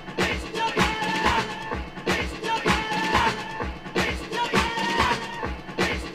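From 4.37 s to 5.39 s the audio suddenly runs fast and sharp, then snaps back to normal. Speed rises by 5.82 percent and pitch by about 98 cents, close to a full semitone. Both move together, so it sounds like a brief detuned lurch. This is likely a drift correction step. Software matching two clocks seems to have jumped the playback rate in one go to drain its buffer, then returned to the normal rate.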